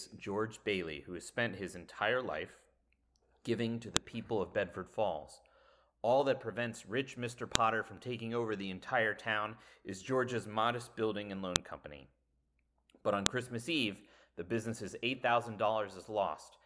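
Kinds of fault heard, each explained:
File header played as audio: looks like the speech was joined from separate WAV pieces with the headers left in, so those bytes play as sharp, loud clicks, at 3.97 s after "giving to the", then 7.55, 11.56 and 13.26 s.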